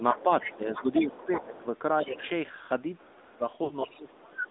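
A speech recording carried over the AMR narrowband mobile codec at 10.2 kbps, plainly audible as buzzy, synthetic vocal texture confined to roughly 250 Hz to 3.7 kHz; that coded graininess, not just the missing top end, separates it from a simple band-limited line. Speech suppressed in double talk pulls the talker down by about 10 dB during 0.0–1.65 s (roughly half a second in total) and 2.03–2.22 s, and by about 20 dB at 3.05–3.44 s, likely an echo canceller ducking while both sides spoke. The other side's voice leaking through sits about 10 dB below the talker at 0.14–1.61 s, about 20 dB below at 2.09–2.29 s and about 15 dB below at 3.84–4.5 s, likely residual loudspeaker echo. It is heard as a second voice rather than noise. Lost AMR speech frames cause a brief dip or warble at 1.36–1.45 s from one 20 ms frame, and a drawn-out, fading smear at 3.64–3.72 s from three frames (60 ms). That stretched, decaying sound marks concealment, unlike the abrupt ducking of double-talk suppression.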